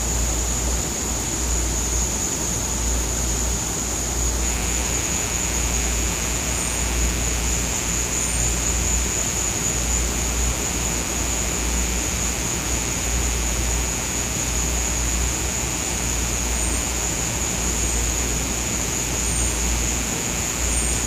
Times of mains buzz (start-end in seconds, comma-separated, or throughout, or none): 4.40-21.07